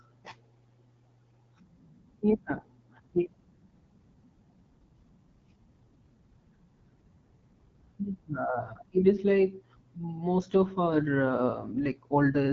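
The whole clip runs through the AMR wideband (HD Voice) codec, likely its 8.85 kbit/s mode, so the speech comes out rough and raspy, with nothing above 7.2 kHz.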